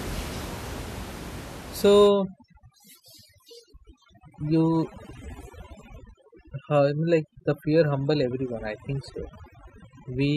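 A speech recording in which overdone noise removal takes hold from 2.07 s through to the end. Up to that point the room noise sits about 15 dB below the voice. After it, an over-aggressive suppressor pulls individual frequency bands down whenever they drop near its noise estimate. The background drops and breaks up into twinkling specks, while the quieter components of the voice are stripped away along with it.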